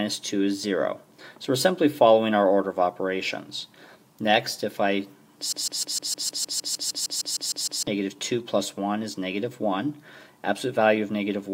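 A broken-record loop from 5.52 to 7.87 s: a 154 ms fragment repeats exactly fifteen times, likely from a stalled player or stream, losing the audio beneath.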